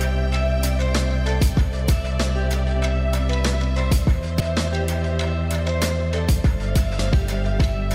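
At 4.40 s and again at 6.99 s there is a brief blip, each lasting only a few milliseconds, from damaged data in a compressed stream: corrupted bytes make the decoder misread those frames and lose sync until it finds the next valid frame header.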